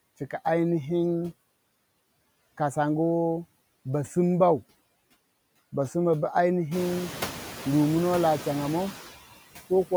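A speech recording runs through a noise suppressor for its whole length, and the suppressor's noise suppressor artifacts are audible throughout. Frame by frame, it estimates which frequency bands hold only steady background and pulls them down by about 18 dB. The noise therefore drops away in the gaps between phrases and returns beneath the speech whenever it resumes. The room noise, a genuine part of the recording, climbs by about 15 dB around six and a half seconds and then sits about 13 dB under the speech, so this pumping becomes plainer in the later part.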